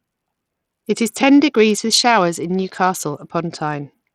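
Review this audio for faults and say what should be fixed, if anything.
The link carrying this speech was likely Bluetooth SBC compression running with a small bit pool, which fits a stream of around 80 kbps. With too few bits to share among its sub-bands, the encoder starves the upper bands and quantises the rest coarsely, and there is no hearing model to decide where the loss matters least. Throughout the clip the treble thins out and flickers, and a gritty, grainy noise with aliasing sits on the speech. To prevent this, record over a wired connection, or set the Bluetooth link to a higher bit pool or a better codec.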